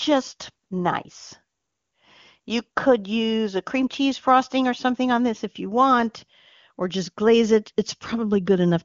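No technical faults occur in the clip; the speech carries the narrow top end of AMR wideband (HD Voice) coding, with nothing above about 7.1 kHz.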